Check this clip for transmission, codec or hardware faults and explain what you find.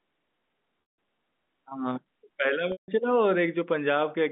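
Two gaps from packet loss with pitch repetition, at 0.82 to 0.98 s and again at 2.72 to 2.88 s. Each loses about 160 ms, which fits a run of eight 20 ms packets. The receiver fills each hole by repeating the last pitch period and fading it out over roughly 50 ms, so the speech holds as a brief buzzy tone, drops to silence, then cross-fades back in. The telephone-band G.711 coding beneath it passes roughly 200 Hz to 3.6 kHz.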